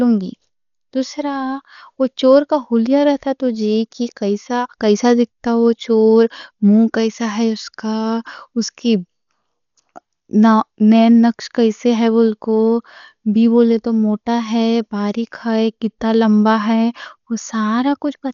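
From start to finish the speech is dull, with nothing above 6.9 kHz. A rough, fluttering noise clings to voiced tones. The cause is likely heavy Dolby Digital compression at a bitrate around 48 kbps. The encoder narrowed the band, and the decoder filled starved frequency lines with dither noise.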